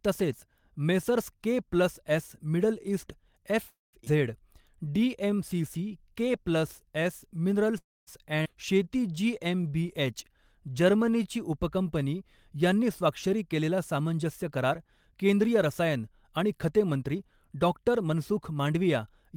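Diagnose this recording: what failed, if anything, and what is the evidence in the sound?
Call audio freeze, network stage. At 3.67–3.96 s and 7.78–8.10 s the last sound is stretched into a fading buzz that drops to silence for about 160 ms and 230 ms. The cause is likely late packets draining the jitter buffer. Playback then resumes where it stopped, adding roughly 0.26 s and 0.29 s of delay.

Skip ahead, network and jitter buffer. Shortly after each freeze, at 4.05–4.09 s and 8.43–8.48 s, playback jumps forward with only a brief join of 14 ms and 24 ms. Around a fifth of a second of speech is discarded each time, removing most of the delay the freeze had built up.

Jitter buffer slow-down. From 4.53 to 7.36 s and 8.75 to 11.24 s the speech runs at 93% and 92% of normal speed with unchanged pitch and drawn-out sounds. The receiver repeated pitch periods to rebuild its reserve, adding 196 ms and 211 ms.

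Jitter buffer speed-up. From 12.79 s to 19.34 s the speech runs at about 106% of normal speed, sounding hurried at constant pitch. The receiver trimmed short pitch-period segments repeatedly to cut excess buffered delay, removing roughly four tenths of a second overall.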